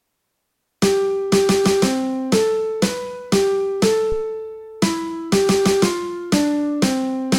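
A phantom power thump lands at 4.12 s and runs to about 4.26 s: a deep, dull knock as a supply step on the live input passes through the coupling capacitors, peaking at about -15 dBFS and dying away within roughly 32 ms. On a waveform it shows as one lopsided pulse pushed off the centre line, then a quick return. On a spectrogram it is a short bright column concentrated in the lowest bands.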